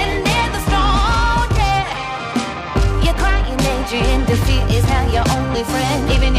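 From start to finish the audio carries periodic clock jitter: the converter's sampling clock is being wobbled at a single rate of around 1.5 kHz. That timing modulation places sidebands on either side of every component in the sound, spaced by that interference frequency, and the effect grows stronger toward the upper frequencies. The result is a rough, metallic edge riding on the audio that drops away whenever the signal falls silent.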